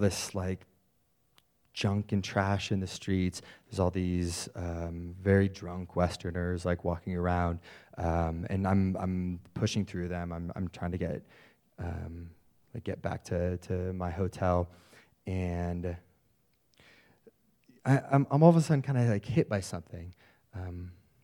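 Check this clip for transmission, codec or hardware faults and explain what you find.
No faults can be heard anywhere in this speech recording. There is nothing to flag at any point in it.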